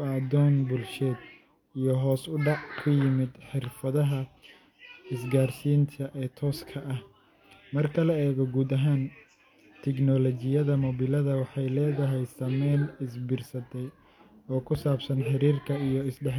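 No technical faults can be heard anywhere in this recording.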